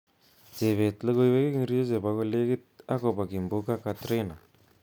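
No technical faults can be heard in the recording at any point. The speech runs from its opening to its close without any audible disruption.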